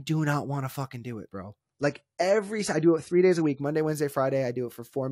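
From 1.60 to 3.60 s, adaptive stream at a lower bitrate: treble suddenly dulls, the spectrogram flat-topped at 11.5 kHz, fitting 32 kbit/s AAC.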